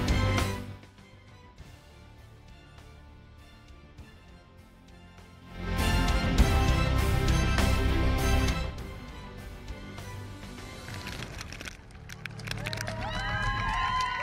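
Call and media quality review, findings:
Zipper noise, 8.45–8.83 s: ticking rides on the sound during a fall of about 15 dB. Gain stage or volume control applies 2 dB jumps, around 20 a second, with no ramp, so each jump clicks.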